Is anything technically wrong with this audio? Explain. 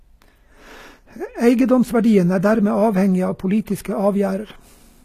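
Yes. Throughout the speech there is plainly audible coding damage consistent with HE-AAC compression, likely at a low bitrate in the region of 20 kbps. Only the lower spectrum is coded directly; the treble is regenerated by copying lower bands upward and fitting them to a coarse envelope, so its harmonics don't align with the real ones. S sounds come out gritty, metallic and lispy, and nothing is present above about 14.9 kHz.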